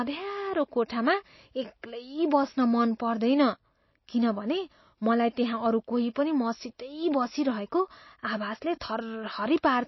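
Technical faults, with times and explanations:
Throughout, MP3 compression: the encoder was likely starved of bits, with damage consistent with a bitrate near 24 kbps, so it discarded all content above about 5.8 kHz and zeroed weak frequency lines that flicker on and off between frames. The speech therefore sounds dull and band-limited, with a watery, swirling texture over the voice, metallic chirping on s sounds, and consonant attacks smeared rather than crisp.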